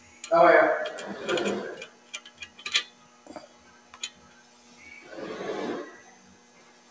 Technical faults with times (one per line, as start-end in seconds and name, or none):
0.00-6.90 noise suppressor applied to music or sounds
1.91-2.32 sound cut by the noise suppressor
2.92-4.71 sound cut by the noise suppressor
6.15-6.90 sound cut by the noise suppressor